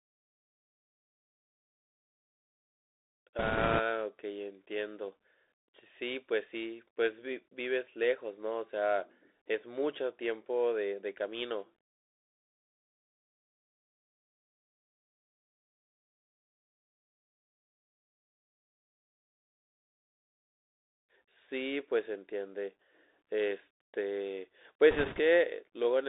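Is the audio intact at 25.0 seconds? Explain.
No. From 24.91 to 25.20 s, bit errors on a Bluetooth voice link flip a few percent of the bits, adding a rushing crackle; the spectrogram shows broadband speckle, the waveform no spikes. The Bluetooth CVSD headset codec also limits the audio to 300 Hz–3.7 kHz, leaving an empty band above and gritty, hissy sibilants.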